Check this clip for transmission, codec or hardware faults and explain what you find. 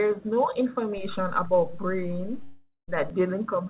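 Two faults stand out in this speech clip, which is band-limited to 4 kHz as a G.711 call path would be.

A DC step runs from 0.98 to 3.10 s. The waveform's zero line jumps, holds, then returns, giving a low thump at each edge while the speech continues unaltered, unlike a dropout.

From 2.44 to 2.90 s the sound gives way to a fading buzz, then about 0.12 s of silence, and 0.44 s of speech never returns, most likely a long network dropout rather than a level shift.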